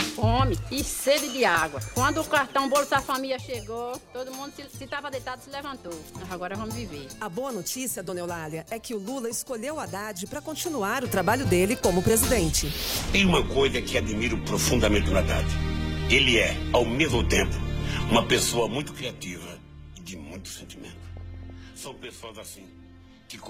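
DAB burbling hits at 3.95 to 4.01 s and again, longer, at 21.17 to 21.50 s. Uncorrected bit errors corrupt single sub-bands, causing short blips of noise that show as flickering, blocky bands on a spectrogram.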